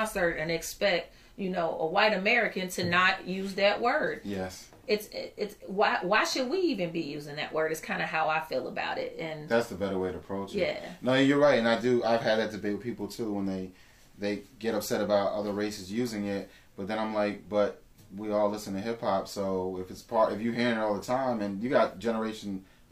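No faults are audible anywhere in the recording.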